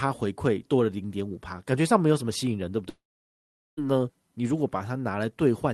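At 2.89 s the speech suddenly stops and the last sound smears into a short fading buzz, which dies away within about a tenth of a second and leaves flat silence for roughly 0.78 s. Speech resumes at 3.79 s, but the material in that gap is simply gone, about 0.88 s of it. That's most likely a long network dropout, with the receiver stretching the last bit of sound before giving up.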